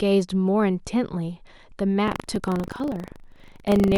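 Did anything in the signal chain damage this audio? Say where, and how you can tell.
Yes. The damage is at the driver or buffer stage, as buffer tearing, from 2.04 s to the end of the speech. A rattling buzz at 25 Hz, one torn buffer every 40 ms, rides on the voice and is present only while sound is playing. The application writing the ring buffer and the hardware reading it have drifted until they cross inside each period, so a small slice of every buffer replays audio from about a tenth of a second earlier, bounded by two abrupt splices.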